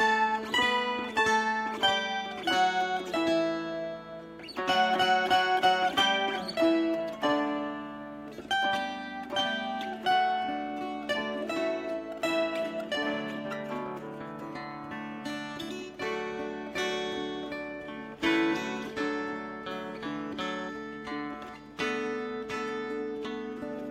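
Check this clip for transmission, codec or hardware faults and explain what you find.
Nothing attributable to the transmission path, the codec or the hardware turns up anywhere in the clip.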